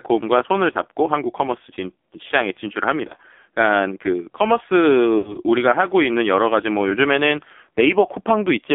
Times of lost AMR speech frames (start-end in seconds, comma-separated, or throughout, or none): 0.72-0.77, 3.08-3.16, 5.18-5.37, 6.90-6.97